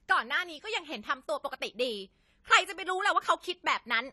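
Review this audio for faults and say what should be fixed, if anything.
The speech runs dull and smeared from start to finish, with a watery, fizzy edge on the sibilants and nothing at all above 14 kHz. That's AAC compression, likely AAC-LC squeezed to a low bitrate; the damage points to something around 32 kbps. At that rate the encoder drops the top of the spectrum and quantises the remaining bands coarsely, leaving gaps that smear the consonants. To prevent it, export from the original at a higher bitrate or in a lossless format.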